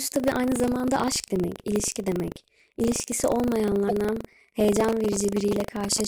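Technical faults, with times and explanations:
Throughout: buffer tearing. The program filling the playback ring buffer and the hardware reading it have drifted out of step, so the two positions cross inside every period. A small slice of each buffer, under a tenth of it, still holds speech from roughly 70 ms earlier, butted against current speech with a hard join on each side. These repeating splices produce a steady robotic rattle at 25 Hz, which fits a 40 ms buffer period, and it sounds only while speech is present.
3.85 to 3.91 s: damaged data in a compressed stream. Part of the encoded stream here is corrupt, so the decoder cannot read those frames correctly, loses its place and hunts forward for the next valid frame header. For about 60 ms the speech is broken up.
4.90 to 6.00 s: GSM signalling bursts. A 2G phone nearby is exchanging brief groups of radio bursts with the network, as it does before a call or a text arrives. 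The audio circuitry rectifies that radio energy into the signal path. The result is a galloping dit-dit-dit of short buzzes at 217 Hz, the burst repetition rate, sitting about 10 dB below the speech across this last stretch.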